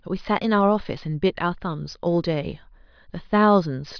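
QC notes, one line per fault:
No faults heard anywhere in the speech.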